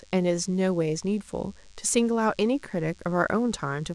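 From start to finish, the speech has a DECT cordless phone buzz running under it. It's a thin, steady buzz with a lot of harmonics, pitched at 100 Hz because the interference arrives as radio bursts every 10 ms. A DECT handset or base was sitting close to the gear, and the audio circuitry rectified those bursts into the signal. It stays low, somewhere around 35 dB below the speech.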